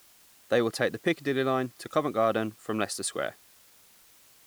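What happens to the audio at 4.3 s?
At 4.3 s the speech sits over a constant, even hiss. This is low bit depth with dither, and it runs through the whole clip rather than starting at that moment. The signal is stored with very few amplitude steps, which fits an 8-bit signal. Dither noise is added before each sample is rounded, so the rounding error becomes steady white noise instead of distortion. The hiss sits roughly 30 dB below the speech and keeps the same level through pauses and loud syllables alike.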